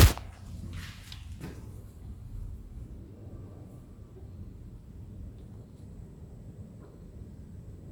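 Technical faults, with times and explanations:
No technical faults can be heard anywhere in this audio.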